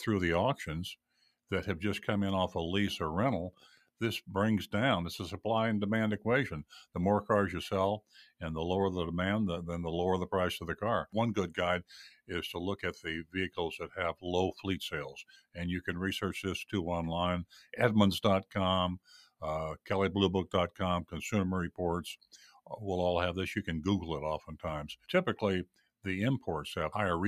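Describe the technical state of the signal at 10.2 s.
At 10.2 s the signal is affected by a noise suppressor applied to music or sounds. It runs through the whole clip, not just this moment. A suppressor built for speech treats sustained tones, ambience and decay as noise and pulls them down. Onsets pass largely intact, while held parts and tails sink by about 5 dB. The result is a pumping, fluttering level and a thinned-out body behind each attack.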